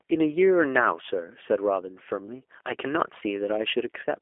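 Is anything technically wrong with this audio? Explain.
Yes. G.729 codec damage runs throughout the clip. The speech has been squeezed through a low-rate speech coder: instead of keeping the waveform, it resynthesises each short frame from a vocal tract filter, a pitch predictor and a few pulses, which fits the 8 kbit/s G.729A mode. The result is plainly audible roughness and a buzzy, synthetic edge. The band is cut to a telephone line of roughly 300 Hz to 3.4 kHz, with nothing above 3.6 kHz.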